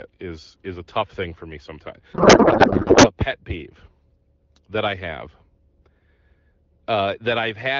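From 2.13 to 3.12 s, after "thing for me sometimes" and before "pet peeve", a codec payload misread turns the speech into garbled, warbling noise. The receiver unpacks the AMR-WB frames with the wrong bit layout, which fits octet-aligned packing read as bandwidth-efficient.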